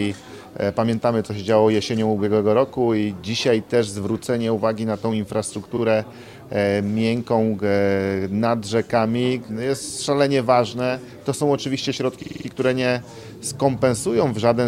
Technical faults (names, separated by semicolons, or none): repeated frames